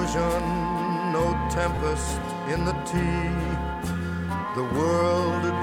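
At 1.75 to 1.77 s the sound briefly turns into a short, hissy smear, roughly 15 ms of noise-like texture in place of clean signal, before it snaps back. These are lost LE Audio frames. The gap fits two missing Bluetooth LE Audio frames, and the LC3 decoder covered it by repeating the last received spectrum with randomised signs. That keeps the energy but scrambles the detail, and the loss was too short for the concealment to fade toward silence.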